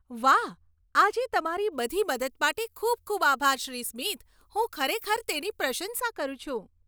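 From 1.72 to 6.0 s the speech turns thin, bright and sibilant: pre-emphasis was left on, leaving the treble about 13 dB too strong at 10 kHz because the matching de-emphasis was never applied.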